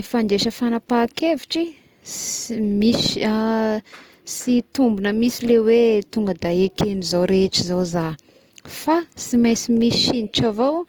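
From start to finish, the speech keeps the artefacts of a heavily compressed first encoding, even though the MP3 carries content up to about 20.1 kHz. This is likely low-bitrate audio saved at a high bitrate, fitting an Opus pass near 24 kbit/s re-saved at 192 kbit/s. Unlike a single low-bitrate encode, the large final file sounds no cleaner, because the second encoding cannot restore what the first removed.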